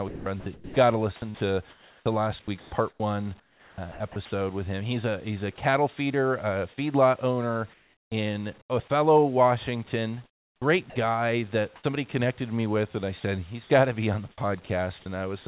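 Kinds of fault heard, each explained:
Sound chopped by the voice detector: The speech repeatedly flips between real sound and synthetic fill, likely because the sender's voice detector kept switching transmission on and off. This happens from 0.08 to 4.16 s, where about 1.7 s is replaced in pieces, again from 10.26 to 10.96 s, and from 14.32 to 15.06 s after "to be on the". On a spectrogram, speech harmonics break into fragments separated by smooth, even noise patches, and the waveform shows ragged envelope gaps.
Sound dropped by the voice detector: Brief moments of speech vanish under steady noise, likely because the detector mistook a quiet stretch for background and stopped sending. One drop comes at 5.56 s, between "a he's a" and "feeder a feedlot owner", and lasts about 20 ms. Another falls from 13.20 to 13.24 s, between "me with and I" and "he's got to be". Each shows as a short, uniform noise slot cutting into the speech energy, with a small notch in the waveform.
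Comfort noise in place of the background: In pauses, the real background gives way to generated noise that is smooth and lacks detail, likely because transmission stopped and the receiver synthesised filler. This happens from 7.74 to 8.70 s and from 11.76 to 11.84 s. The second patch sits about 2 dB below the surrounding background. On a spectrogram, the fill is a flat, textureless band below the 4 kHz ceiling of the G.711 call path. The waveform shows a very even noise floor.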